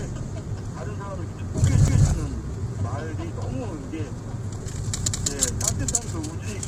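Everyday sound runs through heavy compression, most likely the low-delay AAC compression (AAC-ELD) used in video calls, at a rate that fits roughly 24 kbps. Short frames blur tonal detail, leaving a grainy, rough texture and a thin, synthetic top band; unlike steady background noise, this grain follows the sound itself. Overlapping chunks are heard at 1.88–2.08 s and again at 5.08–5.28 s, where 200 ms of audio plays twice, a stutter recurring at a spacing that points to 3-second processing chunks. This is a repeat rather than a gap, which separates it from a dropout.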